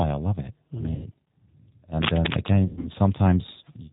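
Throughout, the speech carries G.729 codec damage at 8 kbit/s, rough and slightly synthetic, with the spectrogram showing an empty band above 4 kHz. From 0.95 to 1.08 s, VoIP packet loss concealed by the speech codec smears the sound into a fading buzz; the waveform shows a smooth, decaying, overly periodic stretch. From 2.02 to 2.51 s, dense, uneven scratching sits at about the level of the speech, likely cable scratch noise from a worn contact being moved, and it appears as ragged broadband vertical streaks. From 2.65 to 2.92 s, concealment returns across about 180 ms of scattered gaps, the longest 120 ms, leaving a weak, tonal, blurred patch.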